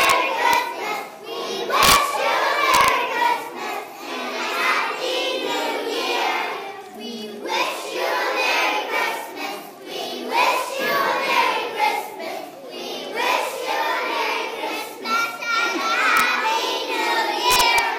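Violent cracks, far sharper than clipping, strike loud peaks at 0.01–0.11 s, 0.53 s, 1.83–1.96 s, 2.74–2.88 s, 16.17–16.20 s and 17.51–17.79 s. This is integer overflow. Peaks pushed about 1 to 4 dB past the integer limit wrapped to the opposite sign instead of being clamped, so each one flips across the full range.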